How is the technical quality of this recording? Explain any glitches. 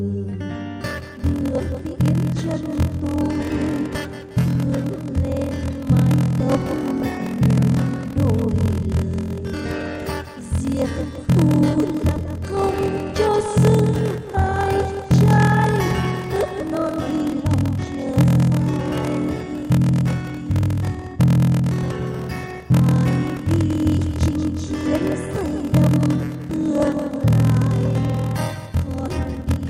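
The quality is poor. From 0.81 s to the end, a steady buzz of about 41.7 Hz runs under the sound, and everything plays slightly slow while staying at about its normal pitch. This is a block size mismatch (padded). One stage hands over shorter blocks than the next stage reads, and the shortfall in each block is filled with silence. The tiny gap repeats once per block, which produces the 41.7 Hz buzz. The sound also stretches to about 0.889 of its normal speed, which fits 1024-sample blocks read as roughly 1152-sample blocks.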